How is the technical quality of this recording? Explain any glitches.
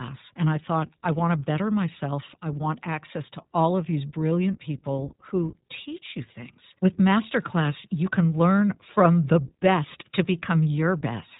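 The recording is noticeably degraded throughout by the iLBC codec. Each 20 ms frame's excitation is coded independently at a low rate, consistent with about 15.2 kbps, and nothing above 3.8 kHz passes, so the speech sounds muffled, rough and plainly synthetic.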